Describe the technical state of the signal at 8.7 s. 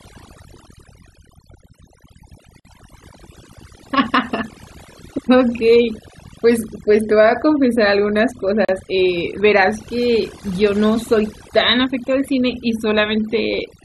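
At 8.65 to 8.69 s the speech drops into a 37 ms silence with smeared edges, then resumes where it stopped: a gap at a join of encoded pieces, from encoder delay and end padding left untrimmed. Throughout, the background is lowered and broken into twinkling specks, the mark of overdone noise removal cutting frequency bands near the noise estimate.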